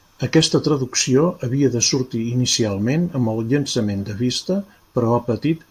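Speech recording, with no technical faults to report.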